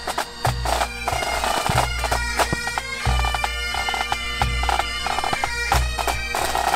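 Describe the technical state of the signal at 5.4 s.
At 5.4 s the signal is just past a loud pop that runs from 5.33 to 5.36 s, about 25 ms long. It is a single sharp pop peaking roughly 15 dB above the surrounding sound, which continues underneath it. The likely cause is a sudden voltage step or pulse entering the chain, such as a plug, switch or static discharge. The downstream circuitry shapes that pulse into a brief thump-like transient.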